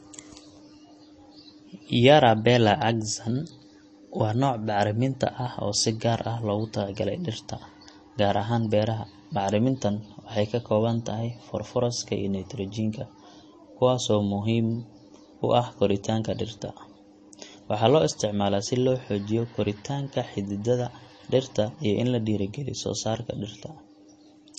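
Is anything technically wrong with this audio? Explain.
Yes. Plainly audible MP3 compression runs throughout the speech. The likely cause is an encoder short of bits, which fits a bitrate around 32 kbps. It cut everything above 8.3 kHz and dropped weak frequency lines frame to frame, leaving a dull, watery sound. A spectrogram shows a flat ceiling at 8.3 kHz with flickering gaps below it.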